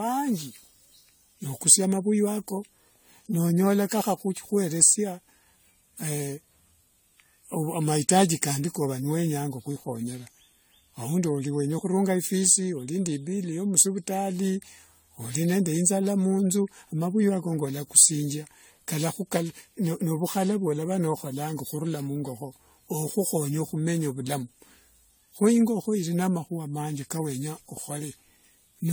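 From start to finish the speech carries generation loss: a swirling, hollow smear, with consonant attacks blurred. The character points to around seven rounds of AAC-LC at roughly 64 kbit/s, likely decoded and re-encoded on shifting frame grids so quantisation noise and holes stacked up. A spectrogram shows patchy, flickering gaps and smeared transients, though content extends to 20 kHz. The waveform's onsets look softened rather than crisp.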